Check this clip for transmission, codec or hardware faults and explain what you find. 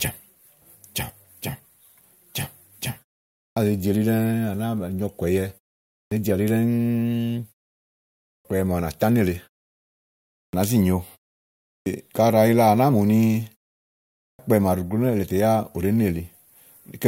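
One fault is present: clipped start after a pause, at 3.47, 6.01, 8.35, 10.44, 11.76 and 14.3 s. After each silence of 0.5 to 1 s, the output device has gone idle. It wakes too late, so roughly the first 90 to 105 ms of speech is lost. Words begin abruptly, without their opening sounds.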